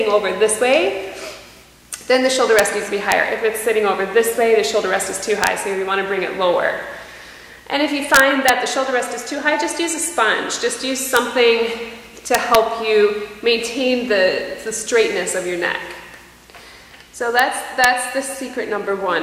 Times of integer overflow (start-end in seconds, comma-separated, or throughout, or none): 2.59, 3.12, 5.44-5.47, 8.14-8.49, 11.17, 12.35-12.55, 17.39, 17.84